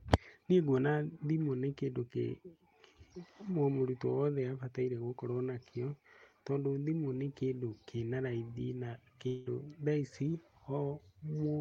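From 9.27 to 9.47 s the speech turns into a fading buzz carrying on the last sound, then resumes with 0.19 s lost, likely a long network dropout.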